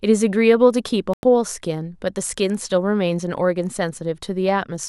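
Speech that drops abruptly to silence from 1.14 to 1.24 s, a hole of about a tenth of a second before the sound resumes further on. It is a digital broadcast dropout: the receiver muted while frames were missing or corrupt, consistent with roughly three lost frames.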